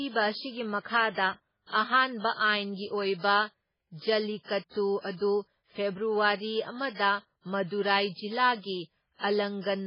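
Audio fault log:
throughout MP3 compression: watery, swirly speech, likely heavy MP3 coding fitting about 16 kbps; spectrogram shows a hard ceiling at 5.2 kHz with flickering gaps below.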